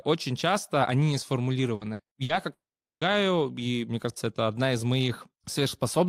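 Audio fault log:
1.75–2.32 s, repeated packet loss (robotic sound): after "очень часто они не", four short gaps up to 60 ms, about 42% concealed, give choppy speech with pieces missing.
2.53–3.04 s, long network dropout: about half a second lost, likely network; brief concealment fades into roughly 440 ms of silence before "и мне кажется это".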